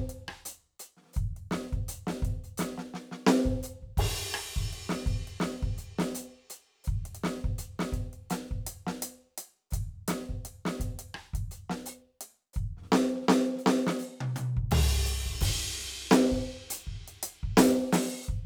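No technical faults can be heard anywhere in this music.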